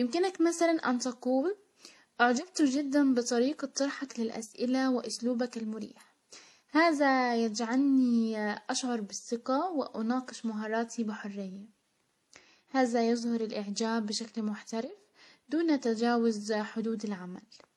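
Throughout this speech clip the top end is dull and capped, with the artefacts of the different codecs heard together. It's likely transcoding between lossy codecs, with the traits of an MP3 pass layered under an HE-AAC pass, both fitting about 48 kbit/s.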